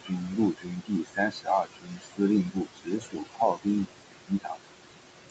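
Noise suppressor artifacts run through the whole clip. The room noise sits only about 8 dB below the speech, and the suppressor pulls the bands it judges to be steady noise down by about 21 dB, frame by frame. The background therefore drops away in gaps and swells back under the speech. The voice stays within the roughly 8 kHz band the call path passes.

Speech cut by the noise suppressor occurs in three stretches. From 0.00 to 2.21 s the suppressor treats parts of the speech as noise and turns them down by as much as about 22 dB, affecting roughly one and a half seconds in total. From 2.44 to 3.67 s, drops of up to about 20 dB swallow well under a second of material. From 4.24 to 4.69 s, about a third of a second is pushed down by up to about 22 dB. Soft consonants and word endings in these spans sound faint or missing.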